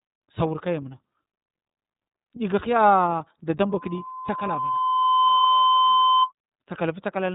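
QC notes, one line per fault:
Throughout: iLBC codec. The speech is band-limited, with nothing above about 3.8 kHz, and has a slightly rough, synthetic edge that is plainly audible. Each 30 ms frame's excitation is coded on its own, without help from the previous frame, and that costs smoothness. The 30 ms framing fits the 13.33 kbps mode. Sibilants lose their brightness because the upper band is simply gone.
3.69 to 6.31 s: loudspeaker feedback squeal. A single tone at 1 kHz appears and swells over roughly a second and a half. It settles at roughly 5 dB above the speech. The microphone was picking up its own loudspeaker, and at 1 kHz the loop gain went past one, so that frequency fed itself and kept growing. It stops at 6.31 s, which suggests the loop was broken there.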